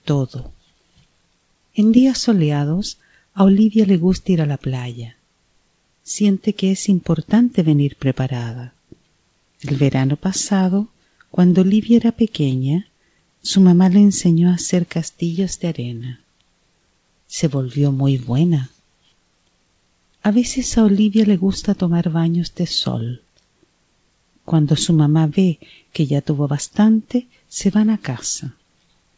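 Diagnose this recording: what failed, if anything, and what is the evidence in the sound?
Nothing has failed here, and no stage of the chain shows a fault. The audio has gone through a WebRTC call path, and the absence of anything above 8 kHz is what that path normally does; it fits a wideband call codec such as G.722 running at 64 kbps.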